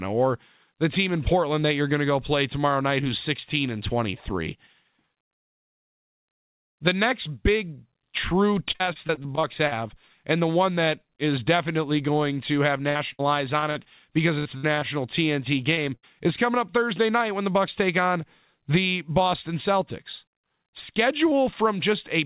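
From 8.72 to 9.73 s, and again from 12.89 to 14.83 s just after "definitely going to have", there is repeated packet loss that gives the speech a robotic sound. Ten and then nine gaps, the longest 43 ms and 63 ms, are each patched by continuing the preceding sound, so about a fifth of each stretch is filled-in audio. It sounds choppy, with pieces missing. On a spectrogram, harmonics flatten into short frozen bands, and the waveform shows repeated, oddly regular cycles.

At 15.75 to 15.79 s there is a short concealed packet loss of about 20 ms. The receiver bridges it by extending the last sound, which is heard as a brief smear. It shows as a brief smoothed patch in the waveform.

At 15.95 to 16.05 s, just before "is coming up", a burst of packet loss removes 80 ms. The concealment holds the last sound and lets it fade, giving a short buzz or hiss before the speech resumes further on. A spectrogram shows a static, decaying band, and the waveform shows its envelope tapering. 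Throughout the clip, nothing is present above 4 kHz, which fits a narrowband telephone codec.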